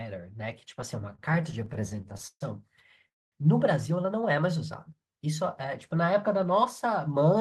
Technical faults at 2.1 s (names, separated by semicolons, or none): repeated stalls (stutter)